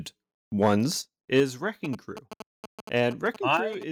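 Speech, with three kinds of fault. The microphone input was most likely set too high, so from 0.62 to 0.75 s and again from 1.37 to 1.40 s the loudest peaks drive past the converter's ceiling, by about 5 dB and then about 3 dB. That is microphone overload: the waveform tops are sheared flat on a noticeable share of samples, up to around a tenth in the second burst, giving those syllables a harsh, crackly edge. The call software's automatic gain control then likely reacted to that overload by pulling the device's input level down, which is heard as a microphone volume stepped down: an abrupt drop of about 6 dB at 1.02 s, about 4 dB at 1.40 s, right on the heels of the second clipped peak, and another of about 6 dB at 3.57 s. Each time, voice and room tone fall together in a single step rather than fading. Separately, from 1.85 to 3.83 s a nearby 2G handset exchanging signalling with its network is transmitting short radio bursts that the audio circuitry rectifies. 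These GSM signalling bursts come through as a galloping dit-dit-dit of short buzzes at the 217 Hz frame rate, sitting about 10 dB below the speech and running underneath it almost to the end of the clip.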